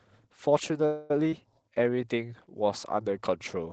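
At 0.85 s the sound stalls for about a quarter of a second, until 1.11 s. The last bit of sound carries on as a fading, buzzy smear for 245 ms, then the speech picks up exactly where it left off. Nothing is lost, just delayed. That's the signature of a call audio freeze. Packets were likely held up in transit and the jitter buffer ran dry, so the receiver had to fill the gap by extending what it already had.

Right after that, between 1.31 and 1.33 s, there's a skip ahead. Roughly 70 ms of speech just isn't there, and the two sides are butted together with only a tiny filled seam. A stretch of audio was dropped, either in transit or by the jitter buffer overflowing, while later audio was already queued, so playback jumps forward rather than pausing.

From 1.70 to 2.02 s the speech drags a bit. This is a jitter buffer slow-down, running at about 88% speed with 46 ms stretched in. The buffer was rebuilding its reserve by repeating single pitch periods, so the pitch stays put while the sounds get drawn out. 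All of this sits on top of an Opus call path whose coding noise and top end around 8 kHz fit a bitrate near 24 kbps.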